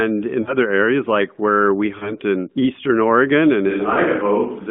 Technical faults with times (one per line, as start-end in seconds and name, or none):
0.42-0.54 lost AMR speech frames
1.98-2.16 lost AMR speech frames
3.70-4.70 switch to a distant microphone
3.94-3.99 lost AMR speech frames